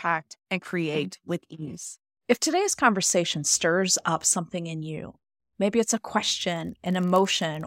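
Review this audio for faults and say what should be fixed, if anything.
A block size mismatch (padded) starts at 6.37 s, just after "you maybe it's a", and runs to the end at 7.66 s. A buzz at 46.9 Hz appears, which fits 1024-sample reads. Each block carries a short zero-filled gap. Playback runs slower by a factor of 0.999. Make the writing stage deliver the same block size the reading stage expects.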